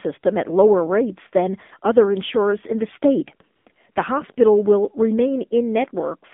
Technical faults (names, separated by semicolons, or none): AMR narrowband mobile codec; AMR comfort noise